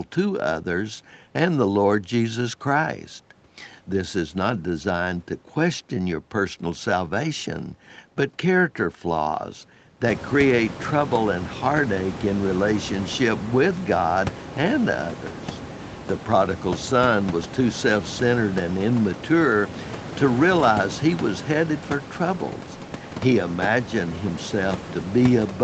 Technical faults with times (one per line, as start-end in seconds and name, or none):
none